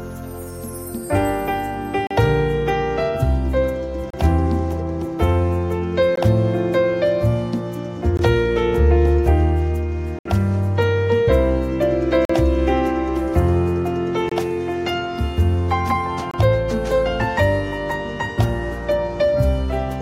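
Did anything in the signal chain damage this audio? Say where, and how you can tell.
Yes: gaps between stream segments at 2.07, 4.10, 6.16, 8.17, 10.19, 12.25, 14.29 and 16.31 s, hard-edged silences of 19 to 66 ms recurring every 2 s. That rhythm points to streaming: segment time stamps don't meet, the player pads with silence, and no audio is lost.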